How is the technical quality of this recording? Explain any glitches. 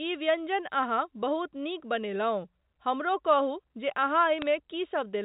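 The recording is telephone-band speech with nothing above 4 kHz, consistent with G.711 mu-law at 64 kbps, and it has one glitch. From 4.38 to 4.43 s there is a short burst of bit errors on the digital phone line. A small fraction of the transmitted bits were flipped, and each flip corrupted a single 8-bit logarithmic sample. Where a high-order bit or the sign bit of a loud sample was hit, the sample jumps far from its true value, producing brief, sharp ticks that sound like crackle over the speech.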